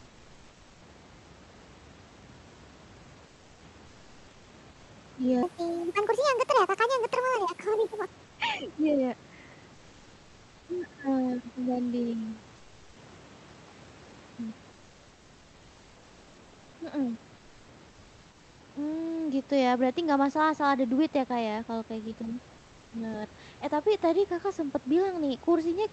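At 3.27 s the room noise, sitting about 29 dB below the loudest speech, drops into a flat, featureless noise for 340 ms. That's comfort noise in place of the background, most likely Opus DTX: the sender goes quiet in pauses and the receiver fills in a synthetic stand-in that's smoother and about 2 to 4 dB quieter. It recurs at 4.71 s (180 ms) and 8.26 s (120 ms).

From 5.43 to 8.06 s there's a section at the wrong speed. It runs about 1.46 times fast, so the speech comes out hurried and lifted by roughly seven semitones, pitch and tempo shifting together. The likely cause is playback against the wrong clock.

The comfort-noise swaps continue at 12.56 s (400 ms), 17.90 s (700 ms, the longest), and 22.58 s (340 ms), right after "ya kalau kayak gitu". Against the real room tone, each one sounds like the air briefly turning smoother and a little quieter.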